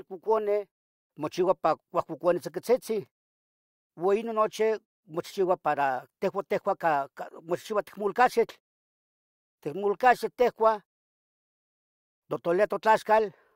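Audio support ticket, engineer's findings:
No faults found in audio.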